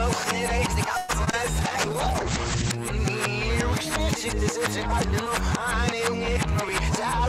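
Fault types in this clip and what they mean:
clock drift buffer slips: Regular clicks recur about every 1.9 s while there is signal, roughly four of them between 0.87 and 6.69 s. The cause is likely two devices running on independent clocks that disagree by something on the order of 700 ppm. The buffer between them fills or drains until a small block, which fits about 70 samples, is dropped or repeated. Each slip produces a brief discontinuity in the waveform.
call audio freeze: From 0.97 to 1.11 s the audio stalls, and the last sound is carried on as a fading buzz or hiss for about 112 ms without dropping to silence. This is likely packets held up in transit so the jitter buffer ran empty and the receiver had to improvise. When they arrived, playback resumed where it had stopped, so nothing is lost, but everything after that point runs about 112 ms late.
short concealed packet loss: Two brief holes of about 20 ms each, at 1.25 to 1.29 s and 1.31 to 1.35 s, never reached the decoder in time. 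The receiver filled each one by extending the preceding sound, continuing its pitch where it was voiced or generating shaped noise where it was not, and then blended back into the real stream. These two patches are heard as a short smear or wobble just after the freeze.
call bitrate drop: At 1.62 s the encoder's target falls from 128 kbps to 10 kbps and stays at that floor for about 1.07 s. The bandwidth estimate had collapsed, and at that rate Opus codes far more coarsely and narrows the audio band from 20 kHz to 8 kHz. The passage therefore loses its top end and sounds rough and muffled. Full quality returns at 2.77 s, once the bitrate recovers.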